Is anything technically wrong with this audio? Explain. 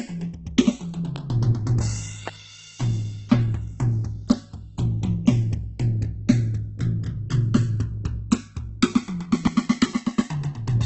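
Yes, this music clip has three problems.

Channels drifting apart run throughout. The left and right channels seem to be clocked separately, off by around 150 parts per million, so their offset grows to roughly 1 ms by the end. In mono, comb notches slide slowly across the spectrum, giving a gradual flanging sweep.

Opus compression damage is heavy throughout, likely from Opus in its CELT music mode at a very low rate, around 12 kbps. Nothing is present above 8.2 kHz. Starved bands are filled with folded or noise content, so tones sound grainy, rough and hissy rather than clean.

Loud pops occur at 1.16–1.18 s and 2.28–2.30 s, each about 15 dB above the music, and at 9.47–9.49 s, about 20 dB above it. Each is a single sharp click, likely a brief voltage step such as a switch or driver glitch, and the music continues underneath.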